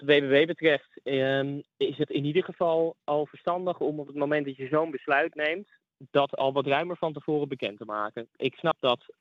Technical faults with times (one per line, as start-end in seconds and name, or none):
2.03-2.05 compressed frames skipped
8.70 compressed frames skipped